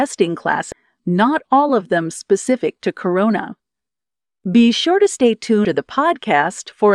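At 0.72 to 0.75 s, just before "not all of them", and again at 5.65 to 5.68 s, after "sure to stay", damaged data in the compressed stream makes the decoder lose sync, giving brief glitches.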